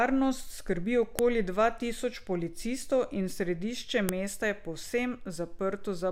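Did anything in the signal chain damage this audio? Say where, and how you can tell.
Yes. File header played as audio, a storage fault: unstripped header bytes sound as clicks at 1.19 s and 4.09 s, lone waveform spikes, thin vertical spectrogram lines.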